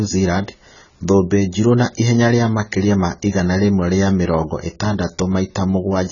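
Throughout, the speech stops dead above 7 kHz and sounds dull, smeared and fizzy on sibilants, likely heavy AAC compression at a very low bitrate.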